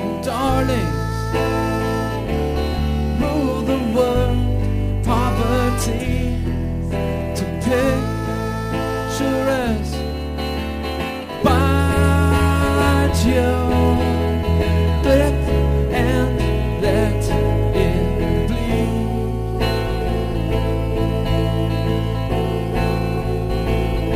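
Sample clock jitter runs through the whole clip. The converter's clock wanders by roughly 10 µs, so samples land early or late. Steep, loud and bright passages gain a grainy hiss around 25 dB below the signal, which disappears whenever the sound goes quiet.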